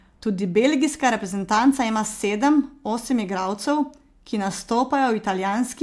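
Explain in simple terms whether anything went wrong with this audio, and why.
Nothing went wrong with this recording that can be heard. The speech comes through without any dropouts, glitches or distortion at any point.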